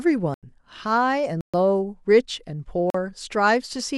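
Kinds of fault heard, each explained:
Block of digital silence: The speech drops to silence three times, then comes back with no fade. The gaps run from 0.34 to 0.43 s, 1.41 to 1.54 s and 2.90 to 2.94 s. They last 85, 128 and 43 ms, so they sound like short holes rather than ticks. The first and last lengths fit buffers of 4096 and 2048 samples. This points to output buffers not filled in time.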